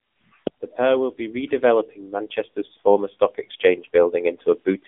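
The speech sounds thin and boxed-in for the whole clip, with a buzzy, synthetic edge. Nothing above 3.6 kHz survives, the 200 Hz to 3.5 kHz line band fits the AMR narrowband mobile codec, and the plainly audible artefacts point to a low mode around 8 kbps.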